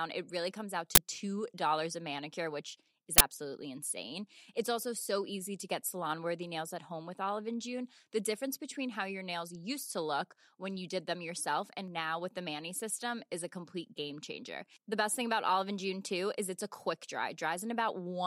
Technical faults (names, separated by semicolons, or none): uninitialised buffer